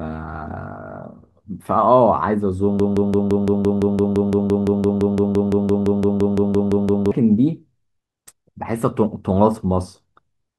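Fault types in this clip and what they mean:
Broken-record loop: from 2.80 to 7.11 s the speech locks onto one 170 ms fragment that repeats identically back to back about 25 times, likely a stalled player or stream resending its last buffer; unlike echo or stutter, nothing new arrives and that stretch is lost.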